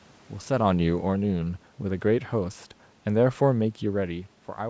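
From 0.5 s to 1.48 s, automatic gain falling lowers the level by about 4 dB. The gain control judged the input too loud or its background noise too strong and eased off gradually. The speech fades, and the room noise fades with it.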